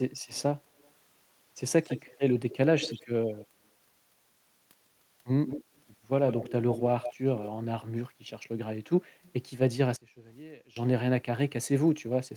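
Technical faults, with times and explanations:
0.78 to 0.9 s, 1.83 to 3.07 s, 3.4 to 3.45 s, 5.46 to 5.81 s, 6.28 to 7.49 s and 9.23 to 9.32 s, echo leak: a delayed second copy of the speech trails the original, 154 ms behind in the first three and 140 ms in the rest. It is barely audible at 0.78 s and 9.23 s, and strongest from 5.46 s to 7.49 s at roughly 10 dB under the speech. The likely cause is a far-end loudspeaker whose echo canceller let part of the played-back signal through its microphone and send it back.
9.1 to 9.22 s, background gated by the echo canceller: the room tone dips by about 8 dB for around a tenth of a second and then recovers, just before the faint echo at 9.23 s. The echo canceller was suppressing the microphone hard while its loudspeaker was active, so the background briefly sinks and returns once the suppression is released.
9.96 to 10.76 s, one channel inverted: the speech suddenly collapses to a faint remnant about 23 dB quieter for roughly 0.8 s. 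The likely cause is one stereo channel with flipped polarity, so the centred speech cancels when the channels are combined to mono. Only the small difference between left and right survives, which is why a faint copy remains rather than nothing at all.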